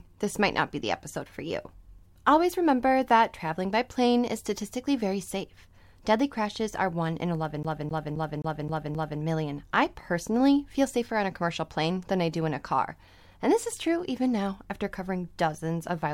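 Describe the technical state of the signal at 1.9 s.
At 1.9 s the speech signal is intact, with no dropout, distortion, glitch or other technical fault to be heard.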